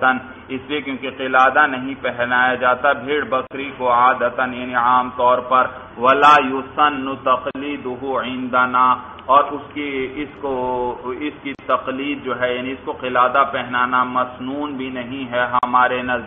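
At 3.47, 7.51, 11.55 and 15.59 s, one every 4 s, the sound drops out for about 40 ms and then resumes where it stopped. This is a gap at a join of encoded pieces: separately encoded segments were butted together with encoder delay and end padding left in. A waveform shows a flat notch, and a spectrogram shows a thin vertical blank stripe with slightly smeared edges.

Between 10.01 and 11.04 s there is a filter restarted on every block. Each block starts from zero state, so a small transient fires at its start, producing an 86.1 Hz buzz that follows the level and fits a 512-sample buffer. On a spectrogram, faint evenly spaced vertical lines appear, with a matching harmonic comb.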